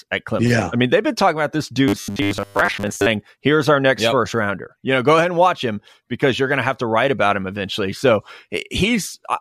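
Right after "been talking about this", from 1.88 to 3.06 s, you get robotic sound from repeated short buffers: a stiff metallic buzz locked at 100 Hz. It's likely starved input, with about 10 ms chunks looped for most of that stretch while the real audio gets skipped.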